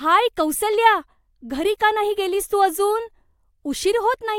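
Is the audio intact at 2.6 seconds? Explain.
Yes, at 2.6 s the speech runs intact, with no dropout, glitch or other fault at that moment.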